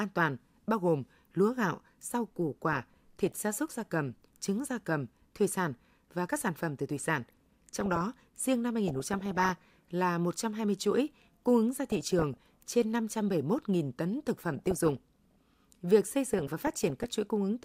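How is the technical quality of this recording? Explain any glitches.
The speech is repeatedly marred by DAB burbling, heard as short blips of noise over the speech at 2.73–3.37 s (after "lúa gạo rau củ", before "gia súc gia cầm"), 7.22–8.05 s, 8.88–9.86 s (after "riêng năm"), 11.74–12.72 s (after "chuỗi cung ứng"), 14.54–15.53 s and 16.34–17.10 s. Weak reception lets bit errors at around 0.7 to 1 percent slip past error correction into the MP2 data, so individual sub-bands jump in level for up to a frame.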